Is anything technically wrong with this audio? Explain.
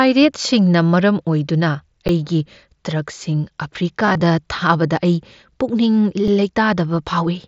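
Yes, there are two kinds of fault in this speech clip.

An underrun with held sample occurs at 2.08 s and again at 6.28 s. The output buffer runs dry, and the converter freezes on its last value for about 10 ms and then about 3 ms. It sounds like a brief flat dropout rather than a repeated tone. Around that much live audio is skipped.

Concealed Bluetooth headset packet loss runs from 4.06 to 4.21 s. Losses totalling 67.5 ms, with runs up to 15 ms, are patched by repeating recent waveform. Unlike the silent holds, this gives a buzzy, full-level smear with a slight warble, heard over the light graininess of the mSBC link.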